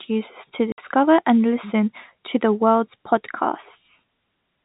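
At 0.72 s, just after "users to", the speech drops out for 60 ms before resuming at "and listen to the". This is packet loss filled with silence: the receiver inserted silence for missing audio, a gap that fits three 20 ms packets, and it has hard edges within the 4 kHz band of the G.711 telephone coding.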